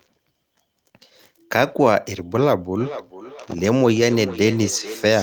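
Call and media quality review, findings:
Feedback echo between two devices from 2.8 s to end: second device's playback re-enters the first microphone, bypassing its echo canceller; speech returns roughly every 0.4 s, about 14 dB down.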